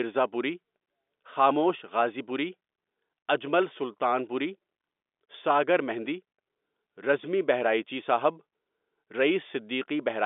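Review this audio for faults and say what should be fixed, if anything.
Nothing here needs fixing: the speech sits within a telephone band of roughly 250 Hz to 3.6 kHz with nothing above about 3.8 kHz, which fits the G.711 telephone coding it has passed through as intended.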